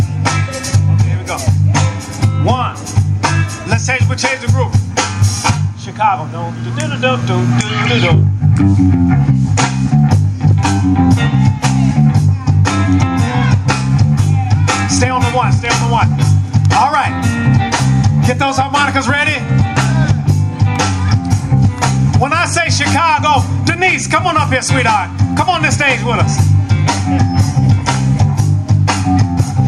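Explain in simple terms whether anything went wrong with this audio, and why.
From start to finish loud and soft parts sit squashed close together in level: gain pumping, likely gain set too high with a limiter clamping down.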